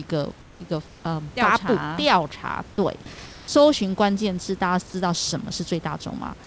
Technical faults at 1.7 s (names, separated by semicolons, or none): none